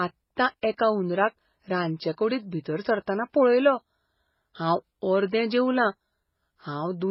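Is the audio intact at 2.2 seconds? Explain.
No. At 2.2 seconds, as through the whole clip, the speech carries two layers of different codec artefacts heard together, most likely from transcoding between lossy codecs. It sounds like a very low-bitrate MP3 re-encoded as HE-AAC, with the second codec adding its own damage to the first. Nothing reaches above about 20.4 kHz.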